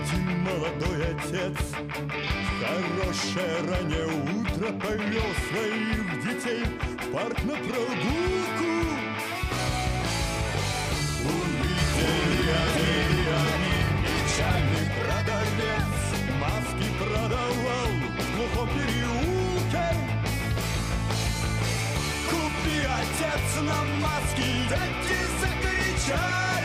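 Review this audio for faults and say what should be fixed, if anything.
Doubled audio track, 11.78 to 14.76 s: a second, full-band copy of the sound runs roughly 0.7 s behind the original at about the same level, with no decay or room colour, and it cuts in and out abruptly at those edges. The likely cause is the same source being captured twice, once through a slower path, or an edit leaving two copies out of step. To prevent it, route each source through a single capture path and check edits for overlapping duplicate regions before export.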